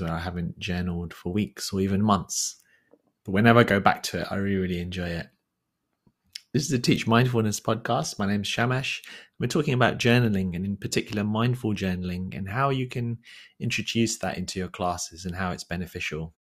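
The speech signal shows no technical faults, and the level eases away smoothly at the very end, from about 16.4 s, with no click or hard edge.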